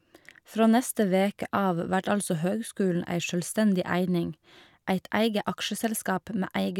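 A short speech recording, with no technical faults to report. Nothing in it calls for a time stamp, a cause or a fix.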